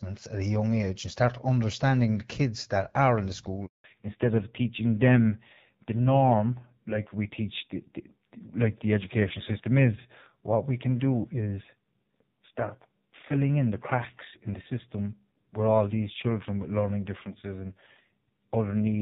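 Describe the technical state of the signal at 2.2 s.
At 2.2 s the audio is intact, with the speech carried through the AMR wideband (HD Voice) codec at a rate that fits 12.65 kbit/s and shows no fault at that moment.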